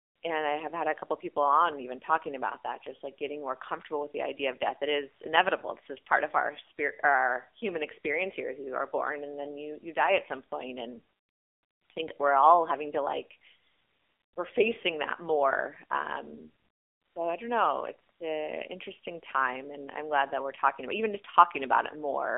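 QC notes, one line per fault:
Throughout: AMR narrowband mobile codec. Speech is held to 300 Hz to 3.5 kHz, with an empty spectrogram above and below, and a buzzy, synthetic tone that fits a low 7.4 kbps mode.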